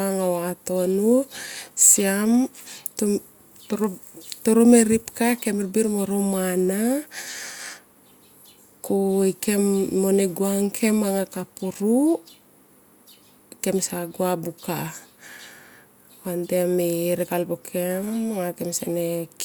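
A recording of speech with no technical fault to report. Nothing in it calls for a time, a cause or a correction.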